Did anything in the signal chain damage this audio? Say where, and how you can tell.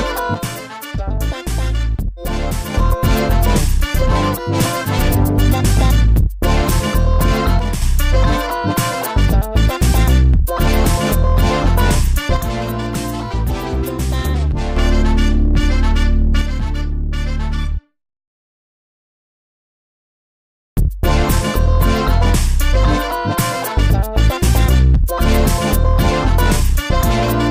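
Yes. The level falls abruptly by about 6 dB from 0.34 to 2.74 s, 7.59 to 7.82 s, 12.37 to 14.77 s and 16.41 to 18.62 s, and returns just as abruptly each time. This is one channel dropping out, likely at the analogue wiring stage, such as a loose stereo connector. When one side of the pair goes silent, the mono sum keeps only half of the shared material. A fault affecting both channels would fade or silence everything instead.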